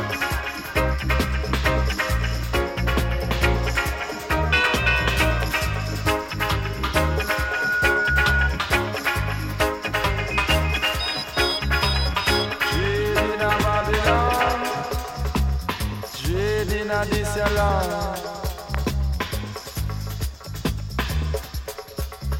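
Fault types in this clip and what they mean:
Loudspeaker feedback squeal: from 6.96 to 8.52 s a 1.5 kHz tone swells over roughly 0.7 s to about 5 dB above the rest of the sound. A microphone is hearing its own loudspeaker, and at that frequency the loop gain passes unity, so the tone keeps reinforcing itself.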